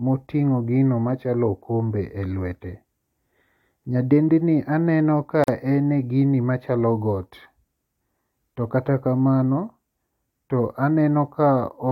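At 5.44 s, right after "aneno ka", a gap at a join of encoded pieces cuts the speech with about 43 ms of silence. Two separately encoded pieces were spliced untrimmed, so encoder delay and end padding remain. Unlike a dropout, no speech is lost: it resumes exactly where it stopped, edges codec-smeared.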